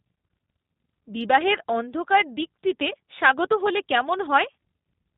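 A speech clip carrying G.729 codec damage from start to finish, plainly audible as a slightly rough, synthetic, buzzy quality, which fits an 8 kbit/s G.729 stream. The codec resynthesises the speech from a vocal tract filter, a pitch predictor and a few pulses per 5 ms subframe. On a spectrogram everything stops sharply at 4 kHz, and the harmonics look smeared and blocky rather than finely drawn.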